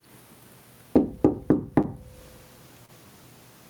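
A recording of everyday sounds with two kinds of fault. Gain pumping runs throughout, most likely from input gain set far too high with a fast limiter clamping each loud sound. The gain swings by around 20 dB, squashing the level differences. Short concealed packet loss occurs at 1.82–1.86 s and 2.86–2.90 s, where about 20 ms of audio failed to arrive and the receiver extended the preceding sound to bridge the hole before blending back, leaving a brief smear or wobble at each point.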